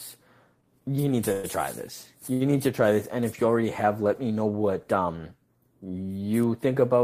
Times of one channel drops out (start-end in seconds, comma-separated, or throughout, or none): none